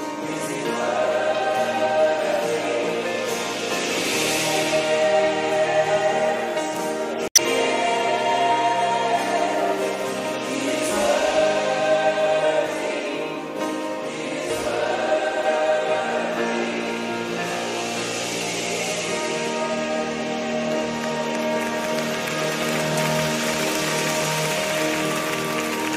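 Damaged data in a compressed stream appears from 7.28 to 7.39 s: corrupted bytes make the decoder misread the frames there and lose sync while it hunts for the next valid frame header, leaving a brief chirp, squawk, click or short hole about 0.11 s long.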